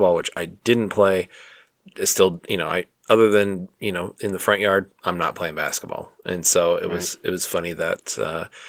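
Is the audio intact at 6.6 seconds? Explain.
Yes, the speech at 6.6 seconds is intact, carrying only the light coding texture of Opus voice compression in its full-band hybrid mode.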